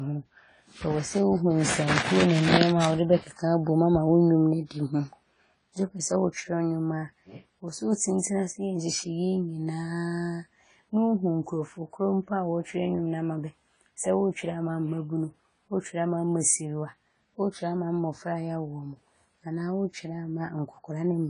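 A speech recording with AAC compression damage throughout. Nothing is heard above 10 kHz, so the top end sounds dull. The damage is plainly audible, with smeared, warbling sibilants. This likely comes from AAC-LC coding at a low bitrate, around 24 kbps.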